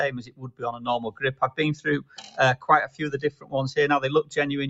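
A speech-tuned noise suppressor has been left running on this sound the whole way through. It's treating sustained parts and tails as noise and pulling them down, so the level swings by about 15 dB and things pump and thin out while sharper attacks get through.

You can hear the sound cut by the noise suppressor three times: 0.17 to 0.87 s, 1.76 to 2.37 s and 3.31 to 3.53 s. Each time it drops by up to about 13 dB, and the held portions sink or fade early. The top end stops at 8 kHz, which is just the call path.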